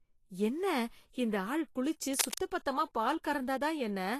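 Low-bitrate lossy coding, likely Vorbis compression, runs through the whole recording. Nothing is left above 14.1 kHz, and the treble is quantised so coarsely that its detail turns to grainy hiss, which fits a low bitrate near 37 kbps. Consonant attacks blur, and the speech sounds plainly roughened.

At 2.13 s, just after "என்ன இந்த ஆள் குளிச்சு", a connection's contact resistance jumps about erratically, likely a worn cable or connector being moved. This is cable scratch noise: dense, uneven scratching bursts only a little quieter than the speech, lasting until 2.38 s.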